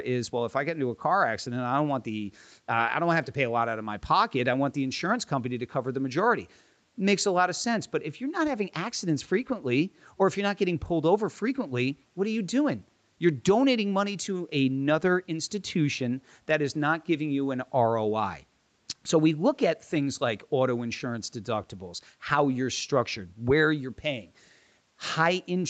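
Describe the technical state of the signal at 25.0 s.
At 25.0 s the speech is intact, with no fault at that moment, just the ordinary band limit near 8 kHz and the usual coding texture of the call path.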